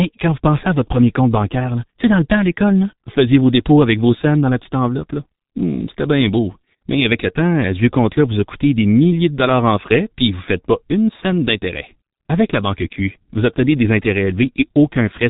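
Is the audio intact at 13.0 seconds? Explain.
No. At 13.0 seconds, as across the whole clip, the speech carries heavy G.723.1 codec damage. Coding 30 ms frames at a rate that fits 6.3 kbit/s, its slowly updated voice model leaves the speech muffled and hoarse, consonants smeared, and nothing above 3.8 kHz.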